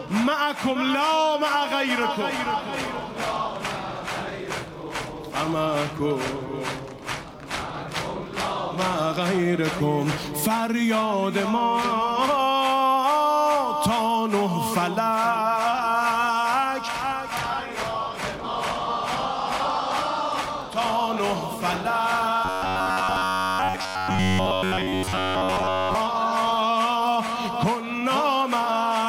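From 22.45 to 25.95 s the audio turns into a rigid, metallic buzz pinned at about 93.8 Hz: robotic sound from repeated short buffers. It's likely the playback repeating roughly 10.7 ms chunks, with most of the real audio skipped and only the broad outline still coming through.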